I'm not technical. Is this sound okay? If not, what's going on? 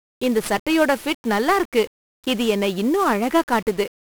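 No. 1-bit DFPWM compression, throughout: each moment of the speech is stored as a single up-or-down step, so everything sounds fuzzy and crackly, with hiss covering the treble.

Bit error spikes, at 0.32 s and 1.09 s: a flipped digital bit briefly throws the signal far off and straight back, causing a sharp, isolated tick.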